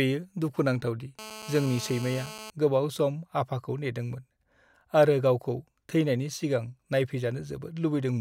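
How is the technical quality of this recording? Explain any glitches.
The recording has one clear glitch: a GSM phone buzz from 1.19 to 2.50 s, between "दुखु नांथाव दि" and "गोबाव सम आफाखौ". A 2G handset on a call nearby was transmitting bursts about 217 times a second, and the audio circuitry rectified those radio pulses into a hard, raspy buzz at 217 Hz, rich in harmonics and sitting about 15 dB below the speech. It stays nearly steady, as it does during a call. Unlike mains hum at 50 or 60 Hz, which is smooth and low, this buzz is higher-pitched and gritty.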